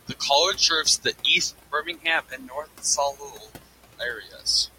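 From the start, the two channels are drifting apart. They come from devices on separate clocks, off by roughly 50 ppm. The delay between them grows to a fraction of a millisecond. Summed to mono, comb notches sweep slowly through the spectrum. It sounds like slow flanging.

Noise suppressor artifacts run through the whole clip too. The suppressor pulls steady noise down by about 16 dB, frame by frame. The room noise sits about 16 dB under the speech. It sinks in pauses and swells under speech.

Speech cut by the noise suppressor comes three times. From 1.72 to 2.05 s, roughly a tenth of a second of speech drops by up to about 15 dB. From 2.29 to 3.66 s, around half a second drops, again up to about 15 dB. From 4.22 to 4.46 s, about a fifth of a second drops by up to about 14 dB. The suppressor mistook soft speech for noise. Those parts sound swallowed and faint.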